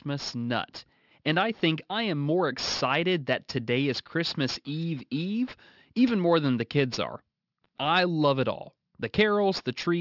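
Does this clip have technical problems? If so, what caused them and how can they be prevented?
Yes, there is aliasing throughout the clip. The audio was resampled to a lower rate with no anti-aliasing filter beforehand, which fits a drop from 48 kHz to 12 kHz. Everything the speech held above 6 kHz folded back below that point as false, unrelated tones, sitting around 15 dB under the speech itself. Sibilants come out gritty and metallic, and the spectrum runs hard right up to 6 kHz. To prevent this, apply a steep low-pass filter below the new half-rate before downsampling, or use a proper resampler that includes one.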